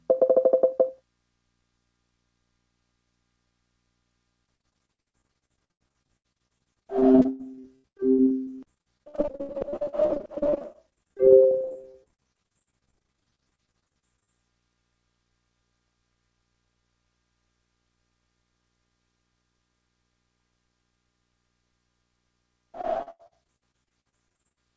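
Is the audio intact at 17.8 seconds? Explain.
Yes, the audio is intact at 17.8 s, with nothing at that moment beyond the ordinary sound of a call path whose codec, consistent with G.722, leaves nothing above 8 kHz.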